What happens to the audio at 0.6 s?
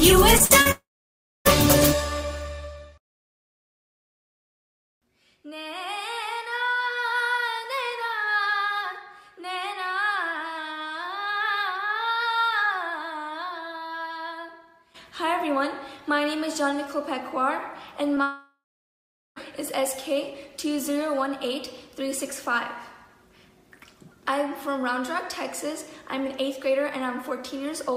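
Short concealed packet loss at 0.45–0.52 s and 0.62–0.67 s: about 40 ms goes missing each time, and the decoder extends the preceding sound, leaving a brief smear or wobble.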